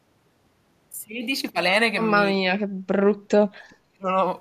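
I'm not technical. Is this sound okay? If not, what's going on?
No. The speech drops away twice, from about 2.6 to 3.0 seconds and again from about 3.16 to 4.17 seconds, sinking almost to silence in patches. This is speech suppressed in double talk. The likely cause is both sides of a call talking at once, so the echo canceller mistook this talker for echo and turned them down. Unlike a network dropout, the loss is a fading, choppy duck that lasts as long as the overlap.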